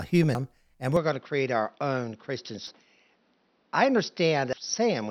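At 0.35 s a short glitch marks damaged data in a compressed stream. The decoder hit corrupted frames, lost sync and skipped to the next header. Unlike a lasting tonal change, this is a momentary blip.

From 0.97 s to the end, the speech turns duller and boxier, with nothing above 6 kHz and a faint new background noise. There is no gap at the change and the level stays about the same. This points to a likely input switch to a poorer device, whose narrower band persists instead of glitching briefly.

The same decoder glitch returns at 2.67 s and 4.53 s, each brief over the narrowed sound.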